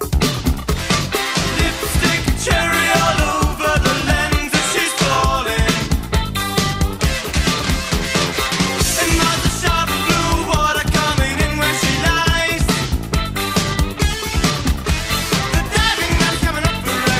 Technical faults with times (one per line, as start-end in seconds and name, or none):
0.00-17.20 clock drift between sender and receiver
5.98-17.12 repeated timing corrections